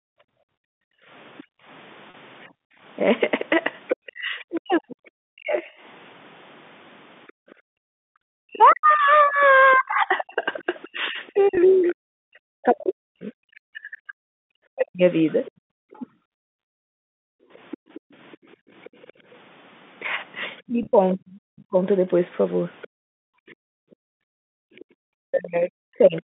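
From 0.01 to 0.2 s, the echo canceller likely could not tell the talker from loudspeaker echo while both sides spoke, so it pulled the talker down with it. This is speech suppressed in double talk: the opening dips by as much as roughly 40 dB.

From 0.48 to 2.83 s the echo canceller clamped the microphone while the loudspeaker played. This is background gated by the echo canceller: room sound drops by up to about 40 dB for around a second in total, then returns.

From 1.38 to 11.93 s the canceller likely failed to remove all of the far end's loudspeaker sound from the microphone. The other side's voice leaking through sits roughly 20 dB under the talker.

At 2.10 to 2.14 s, 40 ms of audio went missing and the receiver bridged the hole by repeating the last pitch period. This packet loss with pitch repetition gives a brief held, buzzy tone.

From 4.06 to 16.06 s, speech is again suppressed in double talk, likely because the canceller mistook the talker for echo during overlap. 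The voice sags and breaks up, by up to roughly 40 dB, over some seven seconds in all.

From 7.32 to 8.19 s the background is gated again, dipping by up to about 40 dB for roughly 0.7 s.

At 11.55 to 11.57 s a 20 ms loss is concealed the same way, giving a short buzzy hold.

From 15.3 to 26.22 s the other side's voice leaks through again, likely from incomplete echo removal, at roughly 25 dB below the talker.

From 16.34 to 19.27 s the canceller gates the background once more, with drops of up to about 40 dB totalling around two seconds.

From 20.66 s to the end, double-talk suppression likely returns, cutting the voice by up to roughly 40 dB for about two seconds in total.

From 20.83 to 20.93 s, 60 ms is lost in scattered pieces of no more than 20 ms each. The pitch repetition turns this into a flutter of brief buzzy holds.

From 23.47 to 24.87 s the background gating comes back, dropping by up to about 40 dB over roughly 1.5 s.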